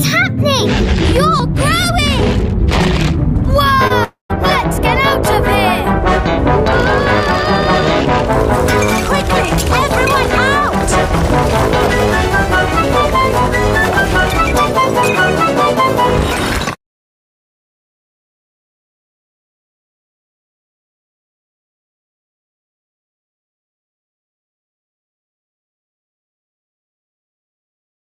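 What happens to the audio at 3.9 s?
A short concealed packet loss runs from 3.87 to 3.92 s: about 20 ms of audio arrived too late for the decoder, which bridged the gap by extending the preceding sound. The result is a brief smear or wobble before normal audio resumes.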